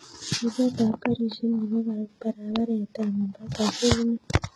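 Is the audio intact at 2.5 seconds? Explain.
No. At 2.5 seconds the speech carries the same artefacts heard throughout the clip, likely from heavy HE-AAC compression at a bitrate consistent with about 16 kbps. Only the lower band is genuinely coded; the treble is regenerated by spectral band replication, copying lower bands upward under a coarse envelope. The upper harmonics therefore don't line up with those below the crossover, so sibilants come out gritty, metallic or lispy.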